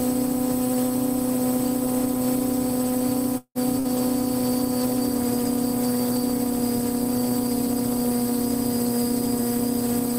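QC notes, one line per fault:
3.37–3.58 s, long network dropout: the last sound is held as a fading buzz or hiss, then about 70 ms of silence, with 0.18 s of audio skipped. This is likely a stalled stream, and it is long enough to reach full silence.
3.79–3.88 s, burst of packet loss: about 60 ms goes missing, bridged by a brief fading buzz or hiss, unlike the longer gap just before.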